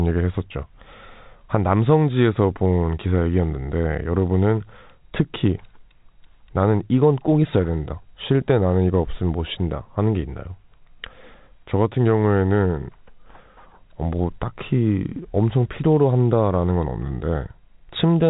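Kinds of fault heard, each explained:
Nothing faulty is audible anywhere in this speech.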